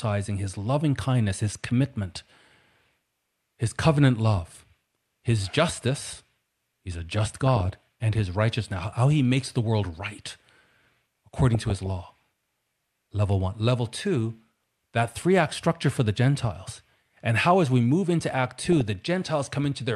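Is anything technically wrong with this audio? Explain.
Yes. DAB burbling occurs three times: 7.46 to 7.82 s, 11.52 to 11.86 s, and 18.59 to 18.81 s. Weak reception lets bit errors, around half a percent at most, slip past error correction into the MP2 data. Corrupted samples put short blips of noise in single sub-bands, and corrupted scale factors make sub-bands leap in level for up to a frame, giving blips and sudden level jumps over the speech. A spectrogram shows scattered bright rectangular blocks in narrow bands, and the waveform shows jagged bursts.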